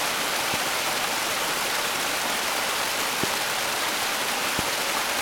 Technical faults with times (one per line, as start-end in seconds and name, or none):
0.54-0.56 loud pop
3.23-3.26 loud pop
4.59-4.61 loud pop